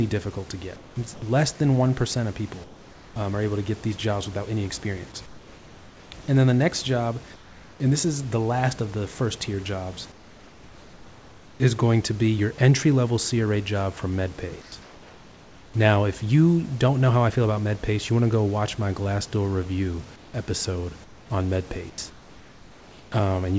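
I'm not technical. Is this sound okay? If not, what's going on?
No. In the pauses, the real room background is replaced by comfort noise in place of the background. This happens at 0.76 to 1.22 s (after "difficult to", before "less than"), 2.64 to 3.16 s (before "um are able to"), 5.26 to 7.80 s, 10.12 to 11.60 s, 14.62 to 15.74 s (after "job from") and 20.16 to 23.12 s. In each gap the natural room sound turns into a flat, featureless hiss, slightly quieter in the second and fourth gaps, until speech resumes. The likely cause is the call's sending side pausing transmission during silence while the receiving side fills in synthetic noise.

Twice the sound is dropped by the voice detector, at 14.62 to 14.72 s and 21.90 to 21.98 s. In each case a brief sliver of sound, a few hundredths of a second, is swallowed and replaced by that same steady hiss. The likely cause is the sender's speech detector mistaking a quiet sound for background and cutting transmission too early.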